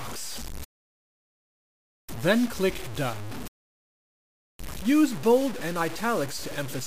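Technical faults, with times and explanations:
throughout, low bit depth without dither: the samples were likely truncated to a coarse grid, fitting about 5 bits, with no dither, so the error follows the sound, producing grainy, shifting distortion only about 15 dB below the signal and gritty quiet moments.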